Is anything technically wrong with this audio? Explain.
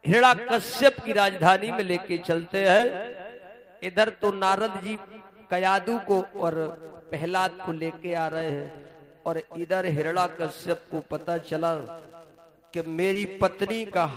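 Yes. Short concealed packet loss occurs at 2.77–2.81 s, 4.95–4.99 s and 13.13–13.17 s. Each time, 20 ms of audio arrived too late, and the decoder filled the gap by extending the preceding sound, producing a brief smear or wobble. A spectrogram shows a thin strip of repeated harmonics or featureless noise.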